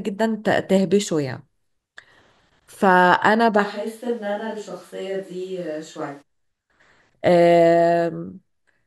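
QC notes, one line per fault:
3.66–6.21 s, switch to a distant microphone: speech abruptly turns roomy, thin and about 5 dB quieter, likely from the close mic dropping out to a farther pickup.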